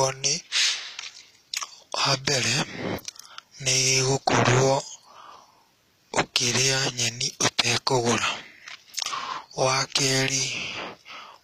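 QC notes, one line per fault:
Throughout, HE-AAC compression: treble is bright but synthetic, s sounds gritty and lispy, nothing above 14.9 kHz. This is likely band replication copying lower bands upward, fitting a bitrate near 24 kbps. Unlike a plain low-pass, the top isn't dull, just misaligned.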